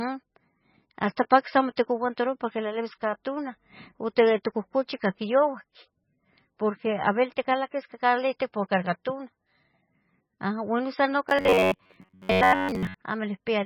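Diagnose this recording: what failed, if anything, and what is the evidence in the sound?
The speech sounds watery and swirly throughout, with smeared consonants. This is codec damage, likely heavy MP3 compression: short of bits, the encoder cut the treble and let weak frequency lines flicker between frames, which fits a very low bitrate.

From 11.29 to 12.94 s the speech turns into a rigid, metallic buzz at 93.8 Hz that still roughly tracks the words. The likely cause is a driver or buffer fault repeating a buffer of about 10.7 ms in place of most of the real audio.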